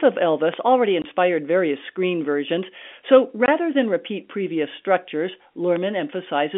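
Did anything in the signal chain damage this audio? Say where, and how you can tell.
Yes. Sharp single pops at 0.54 s and 5.76 s rise about 10 dB and 5 dB above the speech, which continues underneath. This loud pop is likely a voltage transient in the analogue wiring.

Hard-edged 20 ms silences at 1.02 s and 3.46 s cut holes in the speech. This is packet loss filled with silence on the network, and each gap fits one lost packet.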